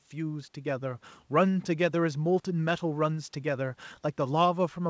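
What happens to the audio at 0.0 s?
Nothing goes wrong at 0.0 s: the speech starts intact, carried over the call path with its content stopping at about 8 kHz.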